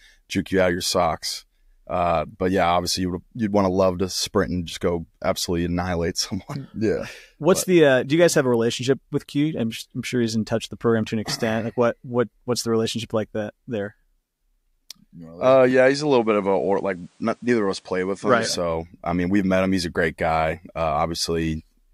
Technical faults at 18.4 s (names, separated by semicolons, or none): input switched to a poorer device